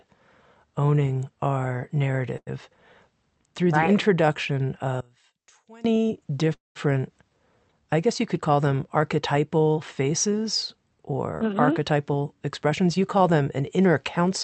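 Speech clip carried over a WebRTC call path, with Opus coding that limits the audio to about 8 kHz and sounds consistent with a 48 kbps stream. It has four timing and channel faults. At 2.37 to 2.49 s, right after "owning our", there is a short stall from a late packet: the jitter buffer ran dry, and the receiver held the last sound for about 92 ms until the packet turned up, then resumed from the same point. Nothing is lost, but the sound hangs slightly too long with a faint buzzy sustain, and everything after it sits about 92 ms later. From 5.01 to 5.85 s, after "through right the introduction", the level collapses by about 25 dB and what remains is a faint copy. This is the signature of one channel inverted, with the likely cause a polarity flip on one side, so that the shared centre content cancels on a mono sum and only the small difference between channels survives. At 6.54 to 6.77 s a call audio freeze appears: the receiver extends the last sound as a decaying buzz or hiss, which then gives way to about 170 ms of silence, filling 217 ms in total before playback picks up where it stopped. 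The likely cause is packets held up in transit, and the result is an inserted gap with no content removed. From 11.46 s to 14.26 s, after "them archetypal faces or", a jitter buffer speed-up runs the audio at about 105% speed while pitch stays unchanged. The receiver trimmed short pitch-period slices repeatedly, around 150 ms in all, to shrink the buffered delay, which leaves the delivery sounding slightly hurried.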